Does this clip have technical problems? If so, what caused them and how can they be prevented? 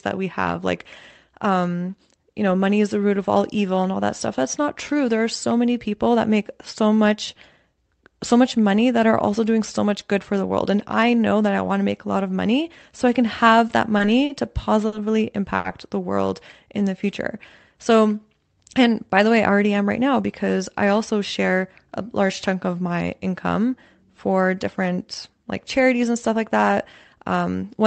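Yes, the clip has three audible faults.

Repeated stalls (stutter) run from 13.67 to 14.94 s, just after "so I can have". The playback halts four times, with the longest hold about 50 ms and roughly 130 ms filled in total, about a tenth of that stretch. Packets reached the receiver late, so its jitter buffer kept running dry, and the last sound was extended each time until data returned. Nothing is lost, but the speech drags and catches. A larger or more adaptive jitter buffer target, together with a steadier network path with less queuing, prevents this.

A short stall from a late packet occurs at 15.56 to 15.66 s, right before "the world". One packet was missing at its playout time, and the buffer emptied. The receiver held the preceding sound for about 80 ms, then resumed from the same point. That matches a sudden 80 ms jump in network delay. No audio is missing, but one sound lingers unnaturally. 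Allowing the jitter buffer more headroom for delay spikes, or prioritising the audio traffic, avoids it.

Jitter buffer speed-up affects 19.13 to 20.21 s, ending just before "because I also share". The buffer held more audio than its target. To catch up, the receiver cut many tiny pitch-period slices, roughly a tenth of a second overall. Speech plays at about 108% speed at unchanged pitch and sounds hurried. A gentler catch-up rate or smoother packet delivery prevents this rushed passage.

The Opus call path itself limits the audio to 8 kHz, which explains the dull top end.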